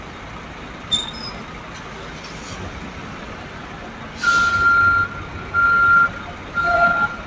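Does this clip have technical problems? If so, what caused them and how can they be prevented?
Yes. A noise suppressor meant for speech stayed active for the whole clip on non-speech sound, treating steady tones, ambience and decay tails as noise and pulling them down by about 10 dB. Onsets pass while sustained parts sink, so the audio pumps and thins, under the call path's ceiling of 8 kHz. Switching the suppressor off, or using a music mode, whenever the source isn't speech prevents this.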